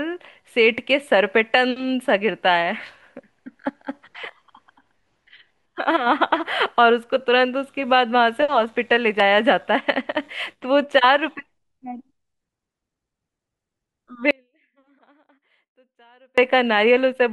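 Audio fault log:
14.31–16.38 s, audio dropout to a faint residue: the speech cuts out abruptly mid-flow for 2.07 s, leaving only a faint leak roughly 35 dB down, before snapping back; likely the signal was lost while the path after the break stayed live.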